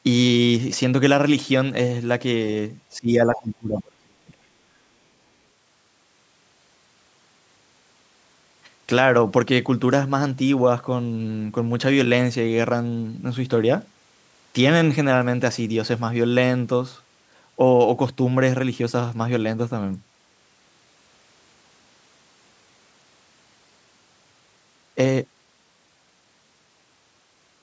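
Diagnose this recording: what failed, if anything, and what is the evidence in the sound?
Call processing failed at the echo canceller. Both ends were talking at once, and it likely could not tell the talker from the loudspeaker echo, so it turned the microphone path down. This is speech suppressed in double talk: from 2.93 to 4.34 s the voice dips and breaks up, falling by roughly 35 dB at its deepest.

The same canceller left residual echo in the microphone signal, likely because its model of the loudspeaker path fell short during the double talk. The other side's voice leaking through appears as a brief scrap from 3.36 to 3.4 s, about 15 dB below the talker, inside the suppressed stretch.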